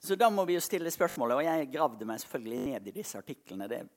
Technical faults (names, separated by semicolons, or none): repeated buffer